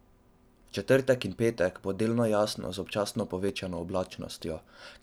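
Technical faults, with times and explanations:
3.49 s, block of digital silence: the speech drops out to silence for about 2.9 ms, which fits a 128-sample block, and the hard edges give a quick tick.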